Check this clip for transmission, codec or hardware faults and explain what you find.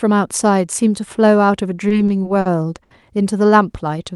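Two network-timing faults are audible in this speech clip, both from audio that arrived late through the call's jitter buffer on a path whose high end stops around 12 kHz, which fits a super-wideband Opus setting.

Repeated stalls (stutter), 1.89 to 2.48 s: the buffer ran dry four times, and the receiver held the last sound, about 110 ms in all, roughly a fifth of that span, the longest hold 50 ms. On a spectrogram, short frozen, smeared bands interrupt the speech. It sounds halting and dragged.

Short stall from a late packet, 2.84 to 2.93 s: one packet arrived about 70 ms late, so the receiver stretched the preceding sound for 70 ms, then resumed where it left off. The waveform shows a slightly dipped, repetitive stretch, and the spectrogram shows a flat, smeared patch. It sounds like a brief held buzz.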